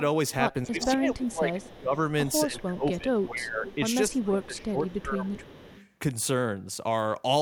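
From 0.64 to 5.44 s the speech repeatedly dips, by around 15 dB at its deepest, for roughly three seconds in total. This is speech suppressed in double talk. Both sides likely spoke at once, and the echo canceller turned the near talker down along with the echo.

Echo leak appears from 0.8 to 1.78 s. A copy of the speech returns 255 ms late, about 10 dB below it. Fainter scraps follow at 2.60 to 2.65 s and 3.18 to 5.91 s, about 25 dB down. The canceller likely let loudspeaker pickup through.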